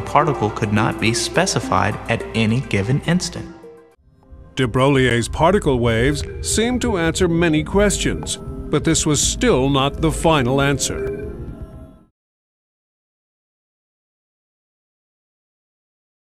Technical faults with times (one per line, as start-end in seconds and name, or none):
5.10 block of digital silence
6.21 block of digital silence
11.07 block of digital silence